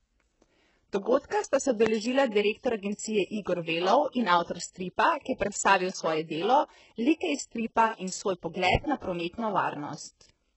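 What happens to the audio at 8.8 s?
From 8.75 to 8.79 s a single loud pop sits on top of the speech, which carries on beneath it. It peaks about 20 dB above the surrounding signal. It was likely caused by a sudden voltage step or pulse, from a plug, a switch, static or a driver glitch, which the downstream circuitry shaped into a short burst. On the waveform it shows as one tall, brief spike. On a spectrogram it is a thin vertical stripe spanning the frequency range.

Underneath the pop, and through the whole clip, is heavy HE-AAC compression damage, which fits a very low bitrate of around 8 kbps. The likely mechanism is a codec that keeps only the lower spectrum and rebuilds the treble by copying lower bands upward under a coarse envelope. The rebuilt harmonics don't line up with the real ones, and nothing remains above 8 kHz. On a spectrogram the energy stops sharply at 8 kHz, and the upper band repeats the texture of the bands below it.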